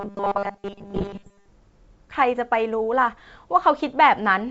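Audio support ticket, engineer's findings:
Robotic sound from repeated short buffers, 0.01 to 1.48 s. Rigid metallic buzz at 200 Hz over the speech. Likely cause: receive buffer underrun. Playback loops the last 5 ms, which fits a 5 ms buffer. Most of the real audio in this span is skipped.

Bit errors on the ADPCM link, 0.85 to 1.29 s, overlapping the buzz. Pops, rough bursts, brief level jumps. Component: G.722 decoder input. The 64 kbit/s wideband coding stays clean after 1.48 s. Error rate sounds around one percent. Each flipped bit upsets the step size and predictor, so the damage rings on briefly.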